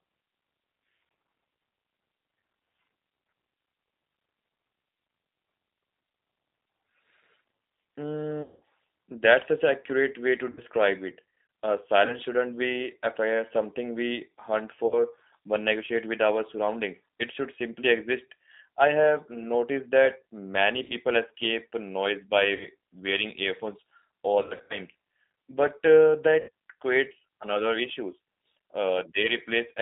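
Throughout, the speech sounds slightly rough and synthetic, held within a narrow line band of roughly 250 Hz to 3.7 kHz. This is the G.729 codec (the G.729A variant at 8 kbit/s), rebuilding each frame from a filter, a pitch predictor and a few pulses, so the damage is plainly audible.

At 8.42 to 8.61 s, 10.51 to 10.62 s, 12.06 to 12.16 s, 14.87 to 15.0 s, 20.84 to 20.94 s, 22.55 to 22.69 s, 24.42 to 24.8 s and 26.4 to 26.5 s, the sound smears into a fading buzz or coloured noise and stays weak afterwards. This is VoIP packet loss concealed by the speech codec. The decoder extrapolates over missing audio, up to 200 ms at 8.42 s, with scattered gaps of up to 80 ms at 24.42 s.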